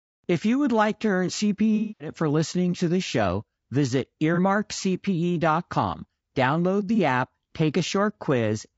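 The speech sounds rough and grainy throughout, with noise between harmonics, likely from low-delay AAC compression (AAC-ELD) at a low bitrate, perhaps around 32 kbps. AAC frame loss with concealment appears at 1.76–2.10 s as a smeared, noisy patch where about 240 ms of audio was lost and rebuilt from earlier spectrum. It recurs at 4.34–4.39 s and 6.95–6.99 s as brief phasey blips.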